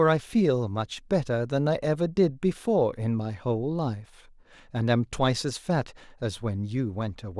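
Speech recording with nothing technically wrong in it.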